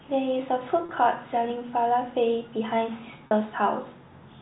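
At 0.86 to 0.89 s and again at 3.27 to 3.31 s, packet loss with pitch repetition fills 30 ms and then 40 ms gaps (fitting three and four 10 ms packets) by looping the last pitch period. This gives a brief buzzy hold rather than the silent hole of a plain dropout.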